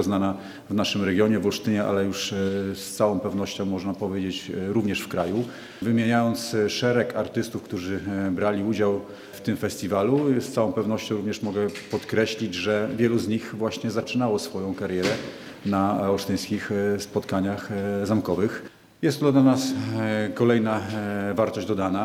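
No technical faults can be heard anywhere in this recording.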